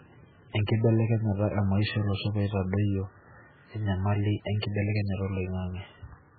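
Throughout, the speech sounds watery and swirly, with nothing above 4.5 kHz, so s sounds are dull and chirpy and attacks smear. The damage is heavy. The likely cause is MP3 compression at a very low bitrate, consistent with something around 8 kbps. Starved of bits, the encoder cuts the treble at a fixed point and drops weak frequency lines, which then flicker on and off between frames and produce the swirling texture.

At 0.67 s, a brief hiss of about 15 ms arrives just ahead of a sharp attack, and the attack itself sounds softened. This is pre-echo. Because the codec spreads quantisation noise evenly across each block, an onset landing late in a block forces noise sized for the loud moment to leak backwards into the quiet instant before it, where the hiss becomes audible.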